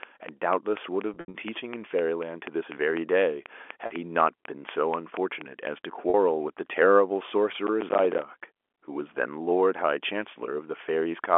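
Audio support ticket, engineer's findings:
Train of clicks, 0.03–5.68 s: regular ticking over the sound and through pauses, about 4.1 clicks/s, roughly twenty clicks, peaks around 10 dB above the signal. Same shape each time. Likely cause: interference from nearby equipment or a struggling interface injecting periodic pulses.

Packet loss with pitch repetition, 1.14–1.34 s: 140 ms lost, scattered over 200 ms. Longest run 80 ms outlasts the repeated pitch period's fade, so the sound drops toward silence, then cross-fades back. At 3.86 s and 6.10 s, 40 ms each: brief held, buzzy note. Receiver concealment repeating the last pitch period. Gap sizes fit 20 ms packets.

Processor overload crackle, 7.67–8.22 s: gritty tearing burst riding on the sound, stopping once load passes. Roughly ten missed deadlines on buffers of around 10 ms, each leaving a hard-edged gap of silence. G.711 telephone coding on the line, 300–3400 Hz band, audible as narrowband throughout.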